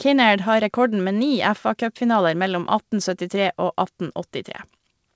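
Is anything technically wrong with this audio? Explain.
No, the speech comes through a call path with its content stopping at 8 kHz, which fits a wideband codec such as G.722 running at 64 kbps, and nothing in the signal points to a technical problem.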